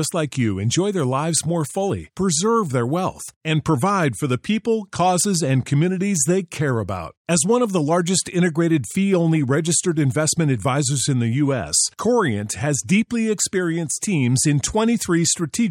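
Nothing in this speech recording stands out as a technical fault, so there's no problem to point to at any moment.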